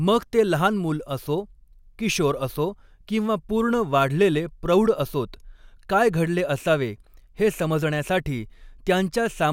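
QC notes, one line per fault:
No faults found in the speech. Nothing in the clip calls for a QC note.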